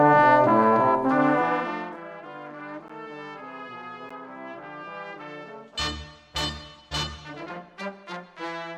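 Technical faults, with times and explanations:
1.26 to 2.04 s, zipper noise: the level drops around 20 dB in 1 dB jumps, about 30 a second, with no smoothing, so each jump ticks and the fade sounds zippy.
2.88 s and 4.09 s, block of digital silence: roughly 13 ms and 12 ms of zeros cut in and out abruptly, so each sounds like a sharp tick or tiny dropout.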